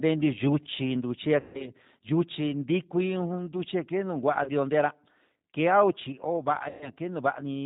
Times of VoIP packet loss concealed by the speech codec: 1.40-1.70, 4.44-4.51, 6.69-6.90

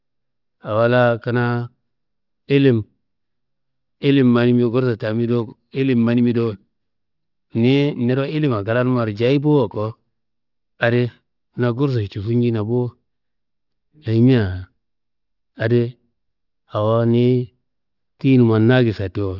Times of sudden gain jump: none

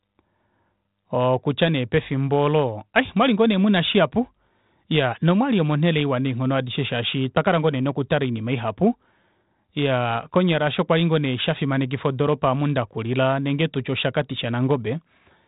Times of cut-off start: none

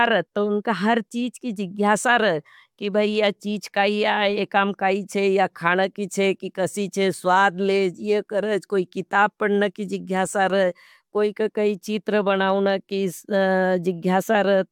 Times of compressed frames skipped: none

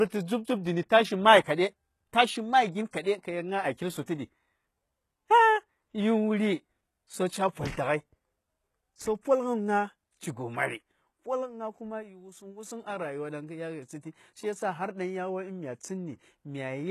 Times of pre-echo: 2.91-2.93, 4.06

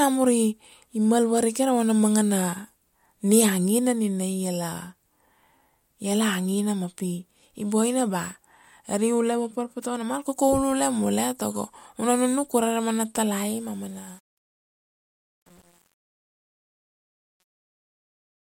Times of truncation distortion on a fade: 13.38-18.59

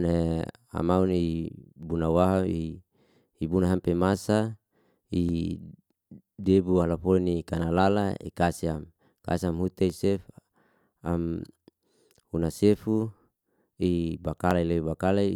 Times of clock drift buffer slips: 0.67-14.51

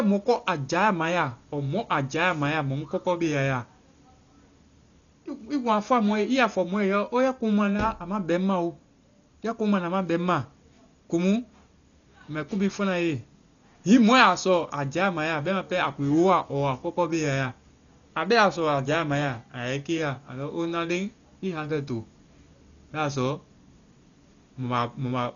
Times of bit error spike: none

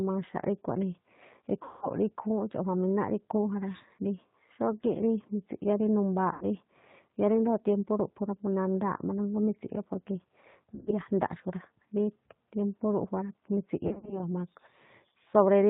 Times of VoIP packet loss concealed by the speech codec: 1.63-1.89, 6.33-6.45, 10.75-10.94, 13.87-14.23

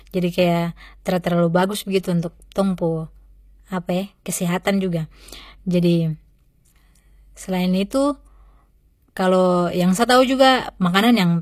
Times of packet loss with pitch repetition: none

